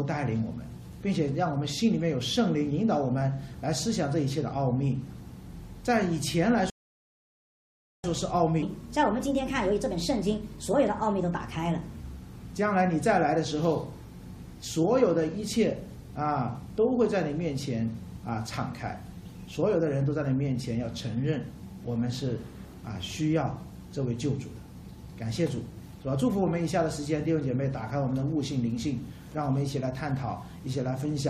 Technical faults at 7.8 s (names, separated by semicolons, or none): rebuffering stall